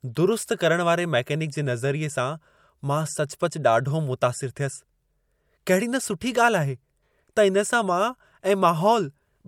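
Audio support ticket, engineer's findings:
Corrupt frame decoded at 3.39 s in the speech: a short, faint glitch, very low in level (peak around -55 dBFS). Likely the codec/decoder stage. A couple of frames came through with flipped bits and got played anyway, so energy briefly landed at the wrong frequencies.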